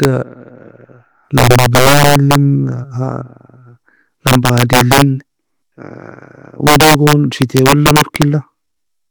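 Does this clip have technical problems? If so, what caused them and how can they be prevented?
Yes. Violent cracks tear through the loud speech peaks at 0.04 s, then from 1.38 to 2.35 s, 4.27 to 5.02 s and 6.67 to 8.22 s. This is integer overflow: the signal was driven about 1 dB, then about 6 dB, past the integer limit, so peaks wrapped to the opposite sign. Prevent it with saturating arithmetic or a limiter before integer conversion.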